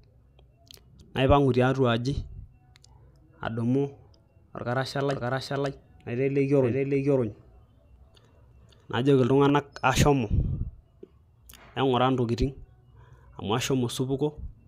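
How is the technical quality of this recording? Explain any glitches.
The recording has one clear glitch: a doubled audio track from 5.10 to 9.50 s. A second full-band copy of the speech runs about half a second behind, at roughly the same level. It likely comes from the same signal being captured again through a slower path. It starts and stops abruptly, with no decay. On a spectrogram the harmonic patterns appear twice, offset horizontally, and the waveform shows overlapping, echo-like envelopes.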